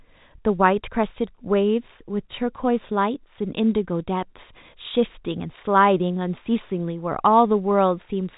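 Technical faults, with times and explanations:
Nothing stood out on listening to this speech.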